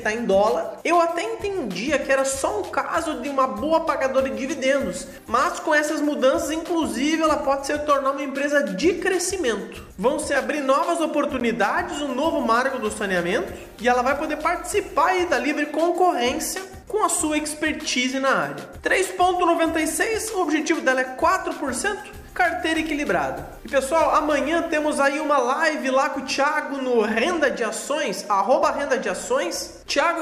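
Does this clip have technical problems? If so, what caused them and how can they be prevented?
Yes: a block of digital silence at 11.40 s, about 13 ms of zeros with abrupt edges, heard as a tick or dip rather than a faded dropout. Give the audio thread larger buffers or higher priority so every output buffer is filled on time.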